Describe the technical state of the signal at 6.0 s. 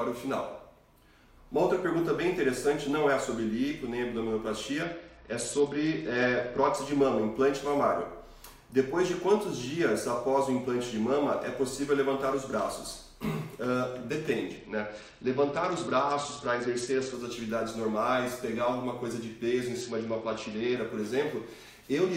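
A Bluetooth SBC bit pool drop covers 6.0 s, running from 4.82 to 6.76 s. On a congested link the encoder was given far fewer bits, which fits a bit pool cut from 31 to 9 at about 72 kbps. The highest sub-bands starve, so treble dulls and gritty quantisation noise rises.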